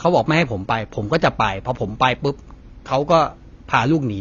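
AAC compression runs through the whole speech recording, from start to finish. Nothing is heard above about 7.8 kHz, so the top of the spectrum is simply gone and the sound is dull and muffled. The damage is plainly audible, with a smeared, coarse texture. The likely cause is AAC-LC encoding at a low bitrate, which fits about 24 kbps, where the encoder lowers its cut-off to spend its few bits on the lower bands.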